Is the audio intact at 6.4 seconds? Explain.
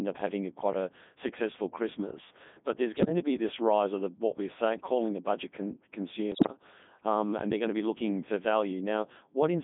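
No. From 6.32 to 6.52 s the speech breaks into bleeps, warbles and robotic gibberish, with sudden jumps in pitch, level and tone colour, just before "um and they're going". These are bit errors on digital voice radio. At very low rates every bit sets the pitch, loudness, voicing or spectral shape of a whole frame. With something like one bit in ten flipped, each hit frame is rebuilt from wrong parameters rather than merely getting noisier.

That burst sits on top of the Codec 2 vocoder heard throughout the clip. The voice is buzzy and robotic and held to roughly 200 Hz to 3.6 kHz, with heavy coding damage. The quality points to the top 3.2 kbit/s mode. The codec sends only pitch, voicing, energy and an envelope, and the decoder rebuilds the sound from sine waves instead of keeping the original waveform.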